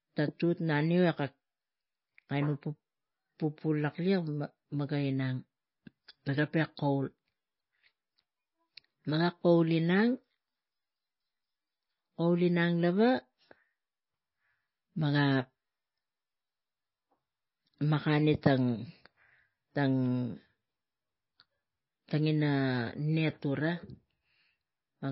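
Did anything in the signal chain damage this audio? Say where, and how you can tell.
Yes. At the codec stage, MP3 compression has plainly damaged this speech throughout: nothing remains above 5.6 kHz, and the sound is watery and swirly. A plain low-pass filter wouldn't swirl; weak frequency lines switching on and off between frames does, likely from a low bitrate around 24 kbps.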